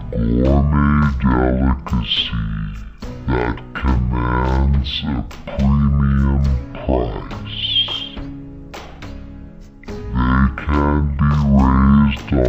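From the first second to the end, the audio shows a stereo read as mono fault: left and right samples, stored alternately, were taken as one continuous channel. Every stretch therefore lasts twice as long, so it plays at 0.5x speed and sits a full octave, 12 semitones, low. On a spectrogram, energy is squeezed into the lower half, with a fainter mirrored copy reflected into the upper half.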